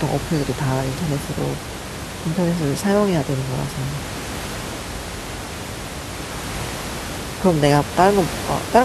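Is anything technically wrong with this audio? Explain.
No, nothing is technically wrong with this audio; the room noise, about 10 dB below the speech, belongs to the recording space.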